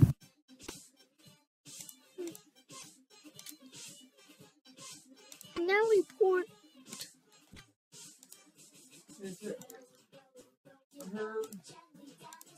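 Corrupt frame decoded at 0.63–0.73, 2.81–2.88, 5.53–5.59, 7.53–7.63 and 10.39–10.42 s: damaged compressed frames were played as if valid, so misread data throws energy onto the wrong frequencies. Each event is a short chirpy burst, peaking around -25 to -45 dBFS and spanning a handful of frames, the last only a couple. Unlike concealed packet loss, there is no smeared repeat, but rather foreign, wrong-sounding content.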